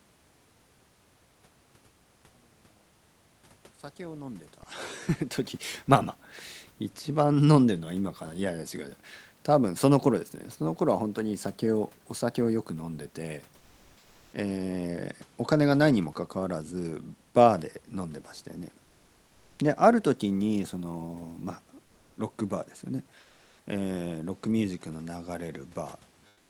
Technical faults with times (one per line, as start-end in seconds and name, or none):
13.57-14.29 comfort noise in place of the background
18.85-19.57 comfort noise in place of the background
23.23-23.59 comfort noise in place of the background
26.29-26.50 comfort noise in place of the background